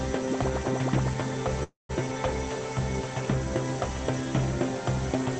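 A call audio freeze runs from 1.63 to 1.91 s. The last sound is stretched into a fading buzz or hiss for about 0.26 s, ending in roughly 0.14 s of silence. Playback then resumes exactly where it stopped, so nothing is lost but everything after is delayed about 0.26 s. This likely comes from late packets draining the jitter buffer on this call path, whose top end stops near 8 kHz.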